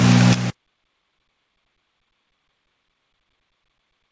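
Nothing is technically wrong with this audio: it carries the G.722 call path as expected, with no content above 8 kHz.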